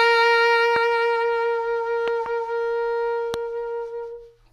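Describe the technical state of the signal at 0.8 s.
A loud pop sits on the music from 0.76 to 0.78 s, a single sharp thump roughly 15 dB above it, likely from a voltage pulse, while the music continues beneath rather than dropping out.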